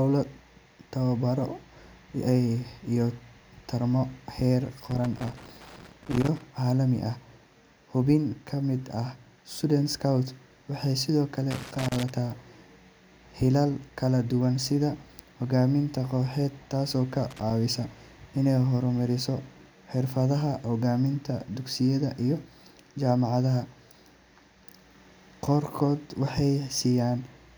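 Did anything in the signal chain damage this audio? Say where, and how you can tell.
Yes. The damage is in the analogue wiring, as loose connector crackle. Three irregular bursts of crackle and scratching interrupt the speech, from 4.91 to 6.41 s, 11.51 to 12.10 s and 17.31 to 17.51 s. They are ragged rather than periodic, which is how a worn or dirty contact behaves when it is disturbed. The contact makes and breaks rapidly, chopping the signal, and any DC on the line turns each break into a pop.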